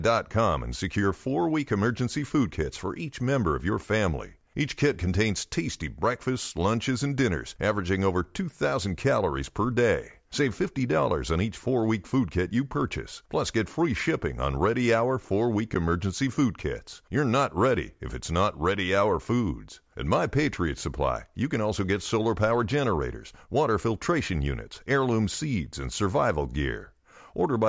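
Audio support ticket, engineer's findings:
Speech signal continuous and stable throughout, with no audible defects found on listening and no component flagged.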